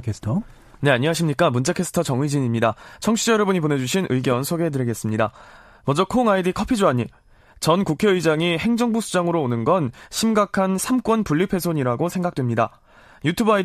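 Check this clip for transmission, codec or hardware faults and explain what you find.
I hear no transmission, codec or hardware faults here.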